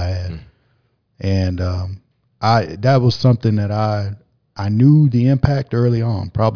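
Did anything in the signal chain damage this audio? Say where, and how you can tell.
No, nothing along the chain from capture to playback leaves an audible mark on this speech recording.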